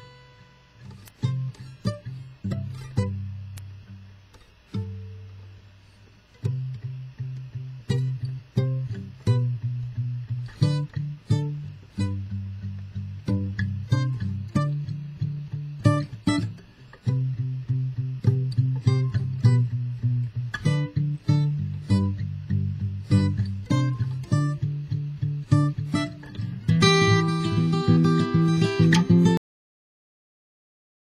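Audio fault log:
29.37 s to end, cut-off end: the sound stops dead partway through at 29.37 s and falls straight into digital silence, with no decay or tail at all. The last buffers never got written out, so the final 1.8 s is simply empty.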